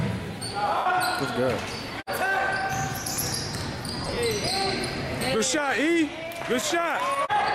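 Two spots of lost LE Audio frames: about 90 ms at 0.77 to 0.86 s, then gaps scattered across 4.05 to 4.17 s, none much over 30 ms. The LC3 decoder patches them by replaying the last spectrum with scrambled signs, so the audio smears into noise.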